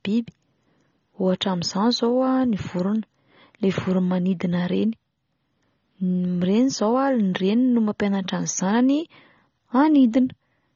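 From start to end, the speech carries plainly audible AAC compression, likely from an AAC-LC encoder at a low bitrate near 24 kbps. Nothing survives above 6.9 kHz, and sibilants turn fizzy and warbling. Plain low-pass filtering would sound dull but clean, without that swirling texture.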